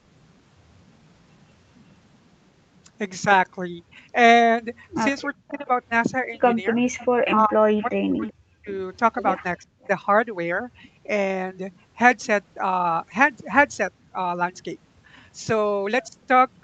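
At 5.37 to 5.67 s, 6.79 to 8.74 s and 9.6 to 9.89 s the speech sinks by roughly 40 dB, likely speech suppressed in double talk, where the echo canceller turns down the near talker along with the far side. Unlike a network dropout, the speech dips or cuts out in pieces while the two sides overlap. From 6.98 to 8.32 s, and briefly at 9.81 to 9.87 s, a likely echo leak lets a copy of the voice through about 380 ms late, around 20 dB and then 35 dB below the speech. It is a delayed repeat, not a loss of signal.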